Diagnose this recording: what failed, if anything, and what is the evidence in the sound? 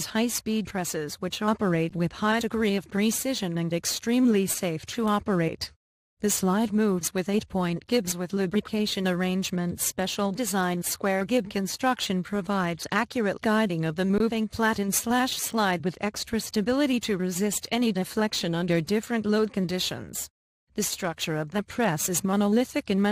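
Codec stage: the whole clip sounds dull and granular, with upper bands flickering out, which is likely MP2 compression at 80 kbps starving the sub-bands of bits.

Buffer stage: underrun with held sample at 1.89 s and 14.18 s, about 13 ms and 20 ms of flat waveform, then playback resumes where it stopped, so barely any click.

Transmission stage: DAB burbling at 7.39 s, brief blips of noise as stray bit errors at about 0.1% corrupt the sub-band data of 5 frames.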